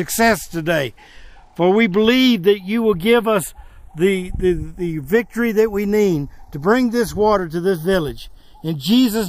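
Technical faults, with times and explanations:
Throughout, channels drifting apart: summed to mono, the sound takes on a slow flanging as comb notches creep through the spectrum. The two channels run on separate clocks, so their offset slides to a fraction of a millisecond, which fits a mismatch of a few tens of parts per million.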